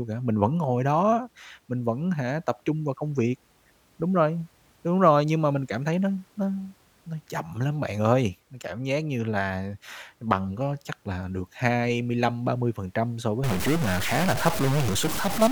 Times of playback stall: none

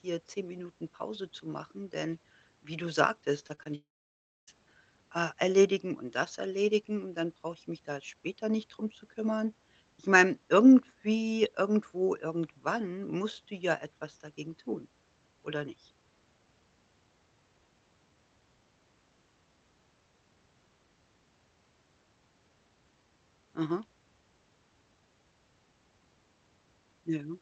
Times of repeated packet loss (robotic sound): 3.39-3.67

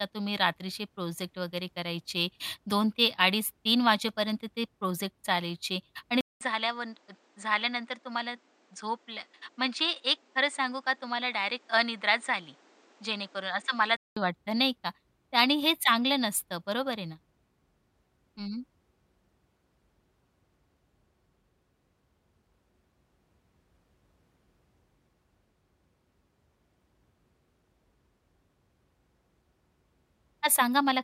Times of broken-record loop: none

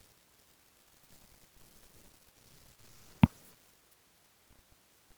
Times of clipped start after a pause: none

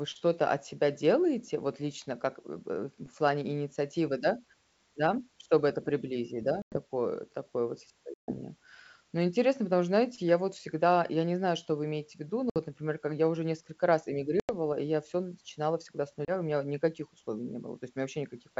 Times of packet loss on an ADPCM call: 6.62-6.78, 8.14-8.33, 12.50-12.58, 14.40-14.50, 16.25-16.31

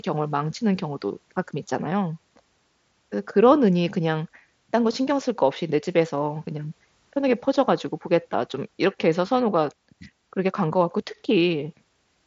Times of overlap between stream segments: none

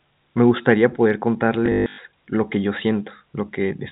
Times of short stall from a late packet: none

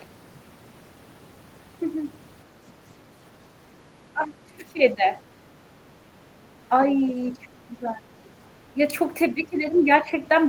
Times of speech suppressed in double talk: 4.13-5.07, 7.39-8.08, 8.74-8.80, 9.33-10.18

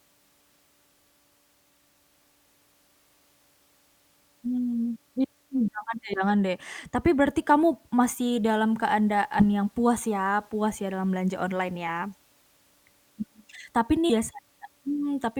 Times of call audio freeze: none

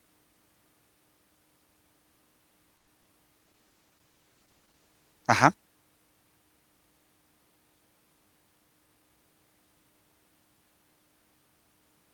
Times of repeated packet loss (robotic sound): 2.77-3.08

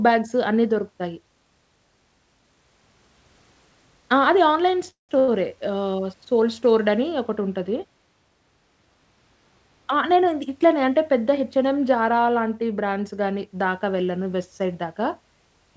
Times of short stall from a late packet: 5.19-5.30

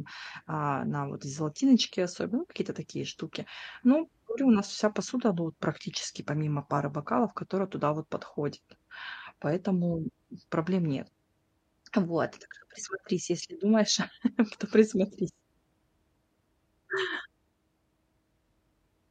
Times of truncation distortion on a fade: none

